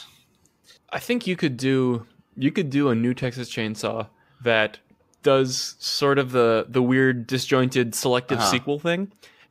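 Nothing is technically wrong with this speech clip at any point.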